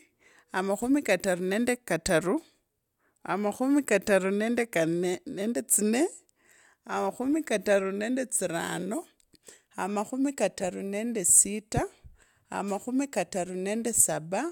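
No technical faults are audible anywhere in this speech recording.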